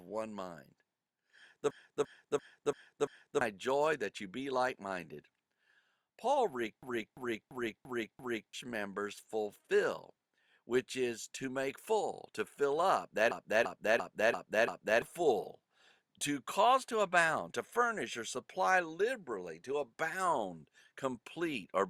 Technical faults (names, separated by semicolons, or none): system hang loop